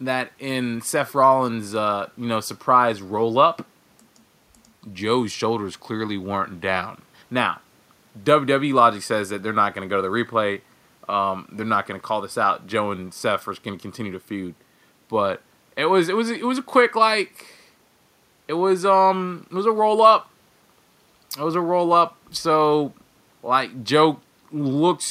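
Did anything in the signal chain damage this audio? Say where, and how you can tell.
No, nothing in the chain audibly damaged this speech.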